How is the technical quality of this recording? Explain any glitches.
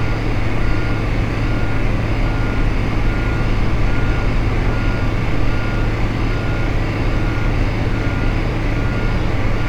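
The signal holds steady throughout, with no dropouts, distortion or other technical glitches to be heard in the sound.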